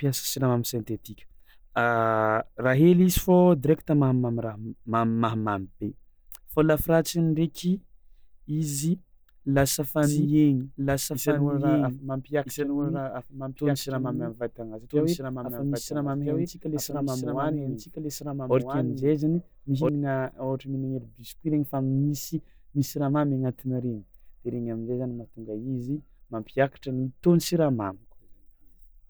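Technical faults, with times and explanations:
10.03 to 19.89 s, doubled audio track: a slower second capture path or an out-of-step edit likely mixed in another copy of the speech, trailing by about one and a half seconds and roughly 5 dB quieter. Each phrase repeats as a dry, full-band copy with no decay, and the doubling starts and stops abruptly.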